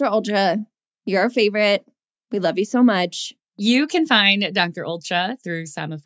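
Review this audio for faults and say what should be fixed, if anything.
No faults found in this speech; nothing needs fixing.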